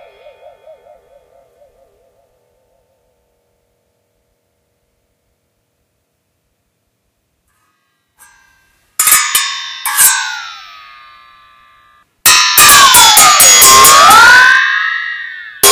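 From about 12.26 s to 14.62 s the whole thing goes into hard clipping, and it's a heavy case: the level is running roughly 22 dB past what the stage can pass, so the peaks get sliced flat instead of rounding over. Those squared-off tops throw a spray of high harmonics up the spectrum, and with that much overdrive it's not just crackle on the peaks. Every loud moment in that stretch turns into a harsh, buzzy fuzz.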